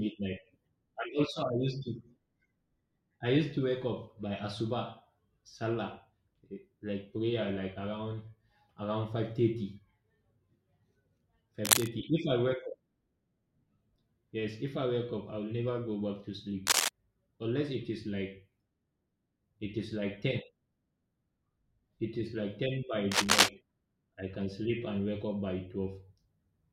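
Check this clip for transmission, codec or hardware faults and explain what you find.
Cable scratch noise occurs three times: 11.65–11.89 s, 16.66–16.88 s and 23.11–23.49 s. Dense, uneven rustling sits about 5 dB above the speech, loudest in the last burst at about 10 dB. It is likely a worn cable or connector being moved, so its contact resistance fluctuates rapidly.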